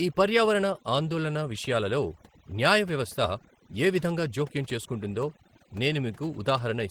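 From start to finish there's overdone noise removal on this speech. The noise reducer was pushed too hard, so any frequency band near its noise estimate gets pulled way down, quiet parts of the voice included. The background drops and breaks up into twinkly specks.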